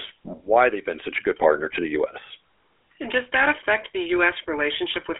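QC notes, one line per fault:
Throughout, GSM full-rate codec: the speech has been forced through a vocal-tract model driven by sparse regular pulses, which fits a 13 kbps GSM full-rate stream, leaving a plainly buzzy, gravelly roughness, a 300 to 3400 Hz telephone band, and nothing above 3.6 kHz.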